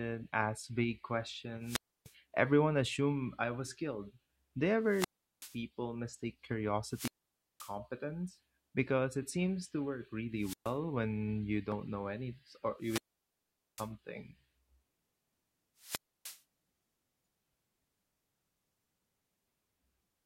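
Wireless microphone squelch dropouts at 1.6, 4.8, 6.9, 10.4, 12.8 and 15.8 s: the FM signal fades, hiss swells, then the receiver mutes for 0.13 to 0.8 s.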